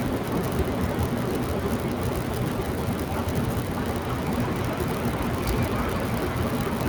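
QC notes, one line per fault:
No faults heard anywhere in the recording; nothing to log.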